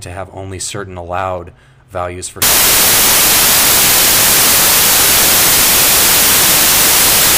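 Samples built from the wrong bytes from 2.42 s to the end: misassembled sample bytes promote the fast-changing low bits, turning the audio into loud, harsh broadband noise.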